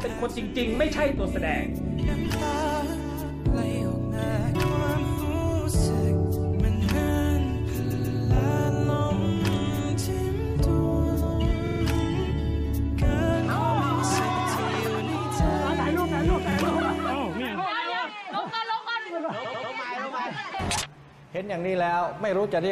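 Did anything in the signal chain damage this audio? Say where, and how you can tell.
Yes, repeated frames at the codec or storage stage: short blocks replay and stutter at 7.90–8.18, 11.66–11.80, 14.35–14.45, 16.51–16.56 and 19.44–19.72 s. Compressed segments of 46 to 139 ms played again, leaving identical copied patterns on a spectrogram.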